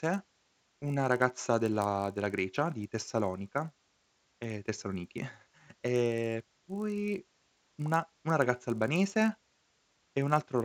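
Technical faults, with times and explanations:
Throughout, resampler restarted on every block: the speech carries a steady 50 Hz buzz that sits under the signal and drops away in pauses. Each 20 ms block was converted by itself, which fits a 16 kHz to 48 kHz upsampling, so the interpolation filter found silence or wrapped-around samples at each block edge. The small error left at every boundary recurs 50 times a second, fusing into a rough buzz rather than separate ticks.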